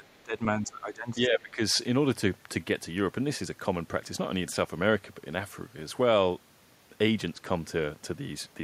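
From 0 to 0.4 s, and again from 0.57 to 1.6 s, the speech drops sharply, by around 20 dB at its deepest. This is speech suppressed in double talk. An echo canceller likely mistook the talker for far-end echo and turned everything down.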